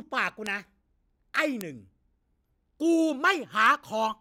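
Flipped bits in the digital path caused bit error spikes at 0.47 s, 1.61 s and 3.66 s: jumps of three, one and one samples reaching about -14, -8 and -14 dBFS, each heard as a sharp broadband tick unrelated to the speech.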